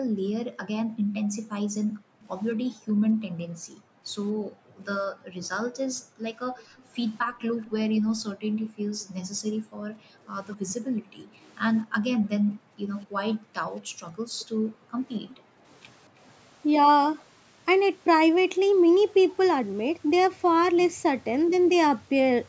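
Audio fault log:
0.0–16.2 s, background gated by the echo canceller: Through the first 16 seconds the room tone keeps ducking away and coming back, dropping by as much as about 40 dB at its deepest, for roughly ten seconds in all. That's the echo canceller slamming the mic gain down whenever it thinks the far-end loudspeaker is active, then releasing. The background pumps in and out instead of sitting steady.
6.78–7.7 s, 9.00–9.04 s, 10.54–11.52 s, 13.01–13.05 s, 14.4–15.36 s, echo leak: There's a faint delayed copy of the speech trailing behind it, around 220 to 240 ms late and well down in level, somewhere between about 30 and 40 dB under the main speech. The two short blips at 9.0 and 13.0 s are just scraps. The likely cause is a loudspeaker on one end whose canceller didn't fully scrub its own pickup, so some of it got sent back.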